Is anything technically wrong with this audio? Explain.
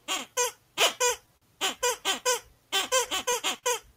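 Yes. There are three timing faults.

Clock drift between sender and receiver runs through the whole clip. The sending clock seems to run slow, by roughly four percent. The jitter buffer keeps draining, so the receiver repeats short pieces to keep playing. The result is small timing hiccups throughout. They arrive at uneven intervals.

A short stall from a late packet comes at 1.37 to 1.43 s. A packet arrived late, and the jitter buffer ran dry. The receiver held the last sound for about 44 ms until the packet arrived, then carried on from the same point. Nothing is lost. That moment is simply held too long, with a slight buzz or dip.

Repeated stalls, heard as a stutter, run from 2.81 to 3.64 s. Packets kept arriving late, so the buffer emptied four times. Each time the receiver stretched the last sound to fill the wait. The longest fill lasts 43 ms, and together they cover 74 ms. Nothing is missing, but this stretch drags and stutters audibly.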